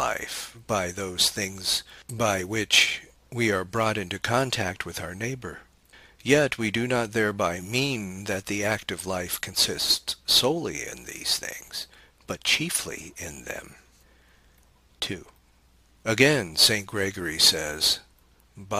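Crude rate conversion runs throughout the audio. Samples were picked by nearest neighbour with no filter, which fits a 48 kHz to 44.1 kHz change. The periodic error sits roughly 20 dB below the signal, adding an inharmonic, gritty fizz that follows loud and high-frequency sound.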